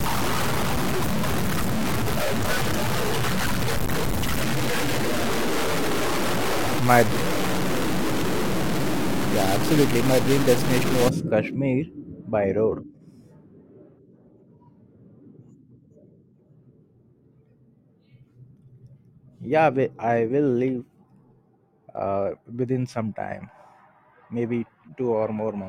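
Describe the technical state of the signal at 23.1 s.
At 23.1 s the audio is intact, with no audible fault at that moment.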